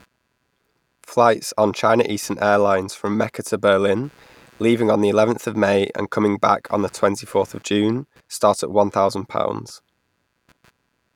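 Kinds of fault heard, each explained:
computer activity noise: shifting processor and graphics load disturbs the shared ground, laying a faint buzz pulsing around 150 times a second under the speech throughout, roughly 40 dB down.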